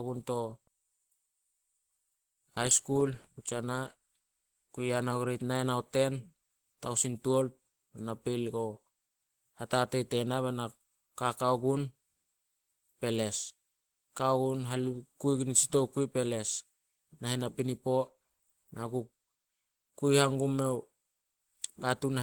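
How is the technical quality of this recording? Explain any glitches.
The recording carries audible Opus compression damage from start to finish; the speech is plainly degraded.

Throughout the 22 seconds, the speech has a muffled, hoarse quality. The cause is likely Opus compression at a very low rate, consistent with about 16 kbps. The encoder appears to be in its hybrid speech mode, coding the lower band with a speech model and patching the upper band from sparse detail. That produces the hoarseness even though content still reaches about 20.2 kHz.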